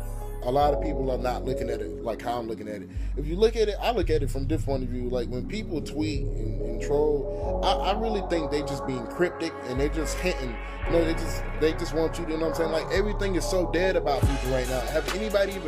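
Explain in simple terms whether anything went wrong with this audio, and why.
Nothing went wrong with this recording. No technical faults turn up anywhere in it, so there is nothing here that needs fixing.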